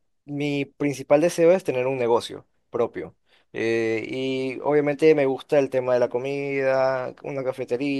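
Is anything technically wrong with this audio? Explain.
No, the speech signal is technically sound, with nothing in it that points to a fault in recording, processing or playback.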